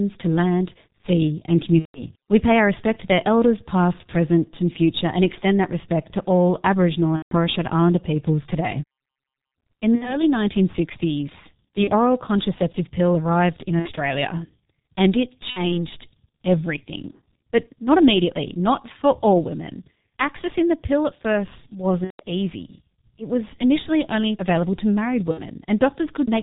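G.723.1 codec, heard throughout the speech: at 6.3 kbit/s the coder keeps nothing above 4 kHz and models the voice coarsely in 30 ms frames, so the damage is heavy. The speech sounds muffled and hoarse, sibilants and plosives smear together, and the voice character drifts sluggishly because the spectral model updates only once per frame. This narrow, rough quality sits under everything else in the clip.

VoIP packet loss concealed by the speech codec occurs at 1.79, 7.16, 9.95, 11.84, 13.79, 15.50, 22.04 and 25.31 s. The missing audio runs from 30 ms up to 150 ms, the longest gaps at 1.79, 7.16 and 22.04 s fitting about five lost frames. The decoder fills each gap by repeating its last pitch and filter at falling gain, producing a buzzy, stretched tone that fades. The voice stays weak and distorted for a short while after packets resume, up to about 15.84 s after the 15.50 s gap.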